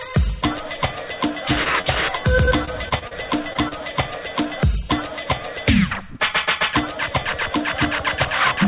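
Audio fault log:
1.64 s, 1.81 s, 3.53 s, 3.69 s: short concealed packet loss. About 20 ms went missing each time, and the decoder papered over it by stretching the last bit of sound, so you get a tiny smear or wobble.
2.45 to 3.13 s: repeated packet loss (robotic sound). Five separate dropouts, the longest about 35 ms, each patched by concealment, so this stretch turns choppy.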